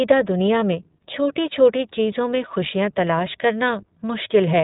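Speech, and the whole clip has been through the iLBC codec. Everything above 4 kHz is gone, and the voice has a plainly audible rough, slightly synthetic edge from each short frame being coded on its own. That fits iLBC's 20 ms, 15.2 kbps mode.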